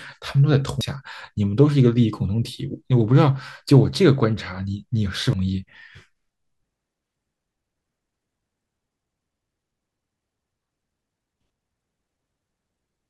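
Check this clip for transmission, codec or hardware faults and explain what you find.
Damaged data in a compressed stream occurs twice in this speech, at 0.81 s and 5.33 s. At each point part of the compressed data is corrupted, so the decoder misreads or discards the affected frame, loses its place in the bitstream and hunts for the next valid frame header before decoding normally again. Each event is a brief chirp or blip that interrupts the speech.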